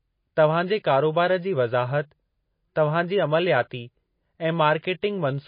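Throughout the speech, the treble stops dead at 5 kHz and the remaining detail sounds watery and swirly, with smeared consonant onsets: likely MP3 compression at a bitrate near 24 kbps. A spectrogram shows a flat ceiling at 5 kHz and patchy, flickering gaps beneath it.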